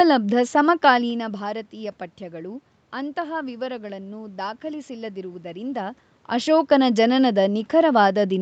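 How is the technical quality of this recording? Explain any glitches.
The technical quality of this recording is good, with no glitches to explain.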